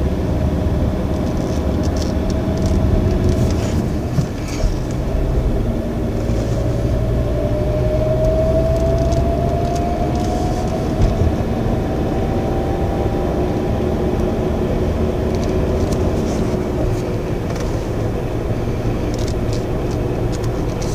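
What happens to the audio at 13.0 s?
Nothing goes wrong at 13.0 s; the audio carries straight through that moment with no audible fault.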